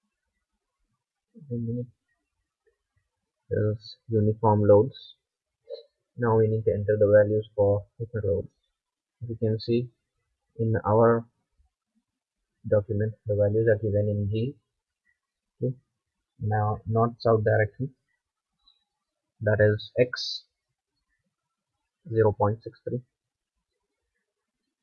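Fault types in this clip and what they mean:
No technical faults are audible anywhere in the signal; level, continuity and timing all hold steady throughout.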